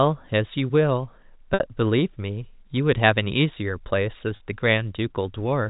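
Packet loss with pitch repetition occurs at 1.54 s (60 ms) and 4.36 s (40 ms). The receiver repeats the last pitch period across each gap, giving a brief, buzzy held tone.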